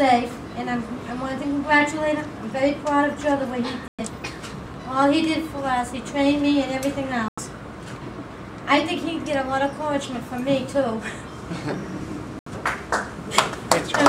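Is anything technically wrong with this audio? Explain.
Yes, there are three short dropouts where the sound cuts to dead silence and then carries on, at 3.88 s, 7.28 s and 12.39 s, lasting about 106 ms, 91 ms and 74 ms. That pattern points to a likely Bluetooth stall: interference delayed the packets, the headphones' buffer emptied, and playback sat silent until the resent data showed up. Each gap is a clean hole rather than a glitch or crackle.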